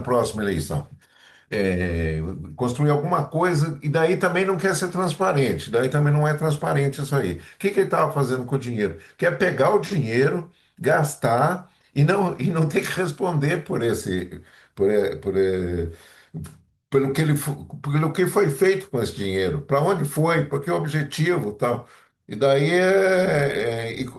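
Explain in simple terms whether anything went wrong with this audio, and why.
Nothing went wrong with this speech recording. It has been through Opus voice compression, which is working as designed and leaves only a light mark on the sound.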